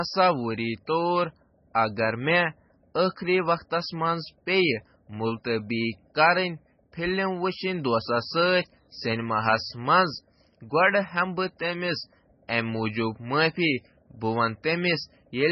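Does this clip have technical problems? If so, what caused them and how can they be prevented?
Yes. Throughout the speech, the damage likely comes from MP3 compression at a very low bitrate, and the heavy artefacts fit a rate around 16 kbps. Starved of bits, the encoder cut everything above 5.9 kHz and discarded weaker frequency lines that then flicker in and out between frames. The result is dull, band-limited speech with a watery, swirling texture, chirpy metallic s sounds and smeared consonant onsets. Prevent it by encoding at a much higher bitrate, or keeping a lossless copy.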